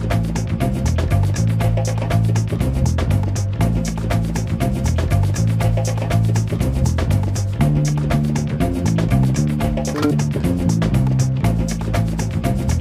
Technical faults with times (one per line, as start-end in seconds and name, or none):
9.94-10.11 audio read two samples at a time (double speed)